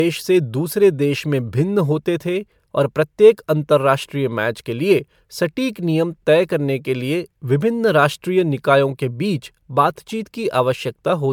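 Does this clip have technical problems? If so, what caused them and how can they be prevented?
Yes: generation loss throughout the speech gives a swirly, hollow smear and blurred attacks, likely from MP3 encoding about four times at 128 kbit/s. A spectrogram shows speckled holes below a cutoff near 20.1 kHz. Keep a lossless master and encode only once.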